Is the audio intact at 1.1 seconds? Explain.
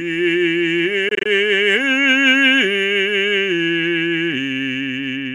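No. A Bluetooth dropout runs from 1.09 to 1.26 s in this music. About 81 ms of sound goes missing in short gaps spread over roughly 160 ms, the longest lasting about 20 ms, which fits around four lost packets. The likely cause is wireless packets arriving at the headphones too late and being discarded. After each gap the music picks up further along, as though it had kept playing through the silence.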